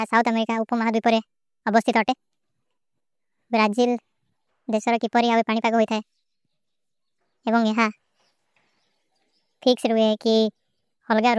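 It's a speech clip, and the whole thing runs fast and high, a classic wrong sample rate problem. Everything plays at 1.5 times normal speed, and the pitch goes up with it by about 7 semitones, so voices sound chipmunky and rushed from start to finish. Speed and pitch move together like that when samples get played out faster than they were captured with no conversion, which fits audio recorded at 16 kHz being played back at 24 kHz.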